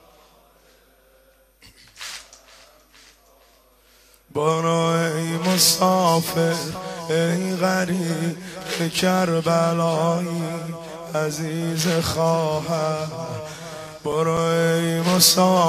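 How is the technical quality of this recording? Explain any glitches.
There's one glitch near the end. From 13.87 to 14.62 s there are CD scratch ticks: four short clicks about five a second, each a few milliseconds. A scratch defeats error correction once per revolution, so the player patches or mutes those samples.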